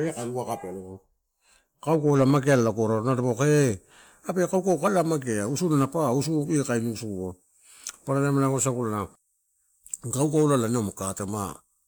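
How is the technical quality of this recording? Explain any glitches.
No audible glitches or faults.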